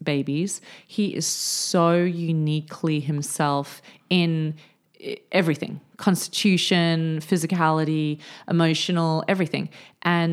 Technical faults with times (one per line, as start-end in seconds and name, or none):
none